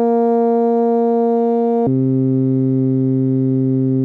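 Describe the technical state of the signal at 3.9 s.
At 3.9 s you're inside a section at the wrong speed, running from about 1.87 s to the end. The music plays at 0.565 times its recorded speed, likely from being fitted to the wrong clock, so everything drags and sits roughly ten semitones lower.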